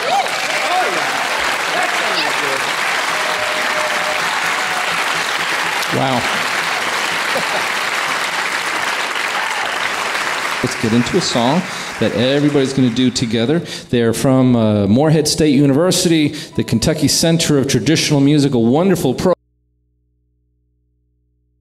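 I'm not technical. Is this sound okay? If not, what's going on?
No. At 19.33 s the sound suddenly cuts out and never returns, leaving only a very faint hum to the end. This is an audio dropout to a faint residue, likely a lost connection while the line stayed open. Unlike a fade or pause, it drops instantly.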